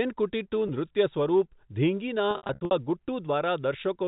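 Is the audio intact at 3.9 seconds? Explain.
Yes, the speech at 3.9 seconds is intact, carried through the G.711 telephone coding with no fault at that moment.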